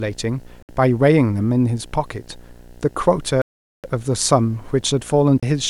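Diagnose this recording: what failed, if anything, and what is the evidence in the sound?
A display or video cable is coupling into the analogue wiring, producing video or display buzz under the speech for the whole clip. The buzz sits at 60 Hz, the picture's field rate, roughly 30 dB below the speech, with harsh, rasping hash in the upper harmonics. The interference rides on the signal path before conversion, so it stays steady and never follows the level of the speech.

Three abrupt dropouts to silence point to a stage after conversion, most likely a Bluetooth stall in the wireless link. Playback stops at 0.62 s for 64 ms, at 3.42 s for 421 ms, and at 5.40 s for 26 ms, then resumes. Interference delays packets until the headphone buffer runs empty, and the audio waits for the resent packets, leaving hard-edged gaps rather than fades or crackle.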